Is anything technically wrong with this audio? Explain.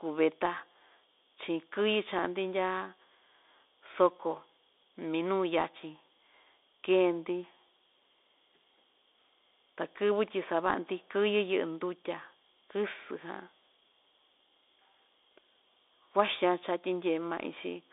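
Yes. Throughout, the speech carries Bluetooth CVSD headset codec damage. Nothing passes above 3.8 kHz, and the line band sits at roughly 300 Hz to 3.7 kHz. That one-bit up/down coding, likely at 64 kbps, lets fast high sounds outrun the adaptive step, so s sounds turn scratchy over a granular hiss. Plain telephone band-limiting would be clean rather than grainy.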